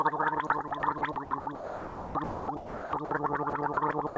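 Sound chopped by the voice detector runs from 0.47 to 3.11 s, where a sender-side voice detector likely kept switching transmission off and on, swapping about 1.53 s of quiet passages for comfort noise. The sound turns choppy, all within the G.722 band that stops at 8 kHz. The same chopping returns from 3.50 to 3.77 s, likely the detector briefly gating again, with about 60 ms replaced by comfort noise as a short flutter.

Sound dropped by the voice detector follows from 4.07 to 4.16 s. The detector likely mistook a soft stretch for background and stopped sending, so about 80 ms of sound is lost and 90 ms of steady comfort noise takes its place.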